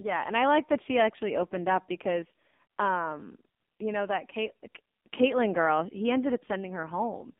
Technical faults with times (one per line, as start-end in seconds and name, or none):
0.00-7.40 AMR narrowband mobile codec